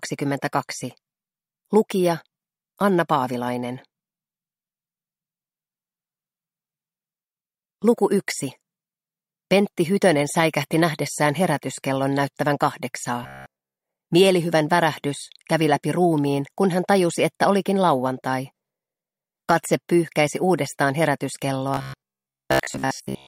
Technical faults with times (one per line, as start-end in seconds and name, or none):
13.23-13.76 robotic sound from repeated short buffers
21.74-23.27 robotic sound from repeated short buffers